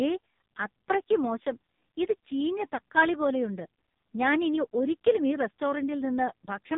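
Speech squeezed through the AMR narrowband mobile codec for the whole clip: nothing survives above about 3.8 kHz, and the voice comes out heavily buzzy and synthetic, since the vocal-tract model is fed very few pulses per frame, which fits one of the lowest AMR-NB modes, around 5.15 kbps.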